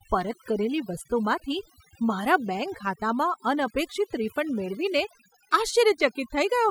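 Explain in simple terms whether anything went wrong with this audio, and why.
From start to finish, the gaps between phrases drop to an unnatural near silence sprinkled with twinkling specks. This is overdone noise removal. A noise reduction tool was pushed too hard on a noisy recording, so it kept shutting off individual slices of the sound spectrum that it mistook for background noise. The softer parts of the voice got swept away with the noise, leaving these hollow, glittery leftovers.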